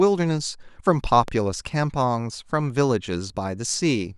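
At 1.28 to 1.30 s a single loud pop cuts across the speech, rising well above it. A sudden electrical pulse, likely from a plug, switch or static discharge, was added to the signal. Unlike a dropout, the speech carries on unbroken underneath.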